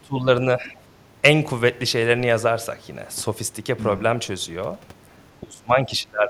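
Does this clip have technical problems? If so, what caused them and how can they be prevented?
Yes. The speech dips in level three times: from 0.01 to 0.27 s by up to about 15 dB, from 0.56 to 0.79 s by a shallower few decibels, and from 5.41 s to the end by up to about 20 dB, over about 0.7 s of that last stretch. This is likely speech suppressed in double talk: both ends spoke together, and the echo canceller, unable to separate the local talker from loudspeaker echo, turned everything down. Using a headset, or an echo canceller with better double-talk detection, prevents this.

From 0.65 to 0.70 s, inside the second dip, a faint scrap of a second voice comes through, about 30 dB below the speech. This is likely the other side's voice leaking through: the far end was playing on a loudspeaker, and the echo canceller left a brief residue in the microphone signal. Headphones, or lower loudspeaker volume with better echo-path modelling, would prevent it.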